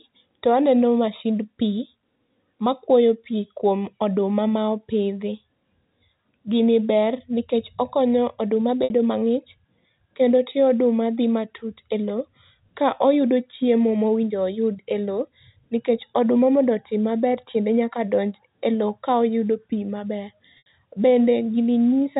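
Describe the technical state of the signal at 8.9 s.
At 8.84 to 8.90 s there is packet loss with pitch repetition: about 60 ms of audio is missing, consistent with three 20 ms packets. The receiver loops the last pitch period, producing a brief buzzy hold that fades toward silence before the speech cross-fades back in.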